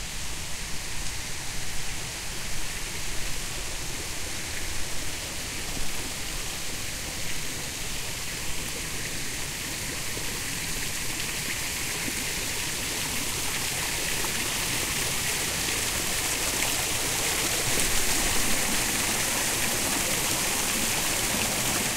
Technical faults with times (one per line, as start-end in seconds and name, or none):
none